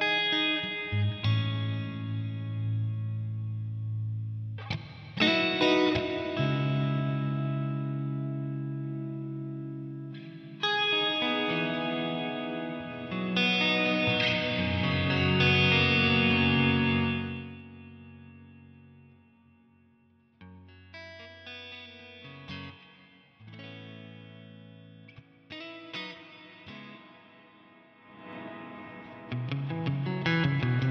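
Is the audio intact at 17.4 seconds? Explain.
No. From 17.04 to 17.62 s the level falls by roughly 20 dB in 1 dB jumps, about forty per second, with no smoothing between them, which is zipper noise. Each jump makes a tiny click, so a fast ticking, zipping texture rides on the sound as it fades. On a waveform the envelope descends as a staircase. On a spectrogram the steps show as faint, evenly spaced vertical lines across the band.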